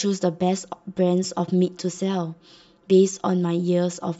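Throughout the speech, one channel arrives roughly 5 ms behind the other, and when the two are folded to mono the result is channel delay (comb filtering). Energy shared by both channels cancels at a regular series of frequencies, starting near 100 Hz and repeating at even intervals up the spectrum. Those fixed notches carve the speech into a hollow, phasey sound, as though heard through a tube.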